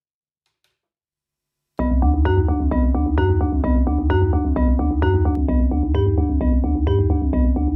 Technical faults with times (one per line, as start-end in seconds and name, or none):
5.35-7.75 channel delay (comb filtering)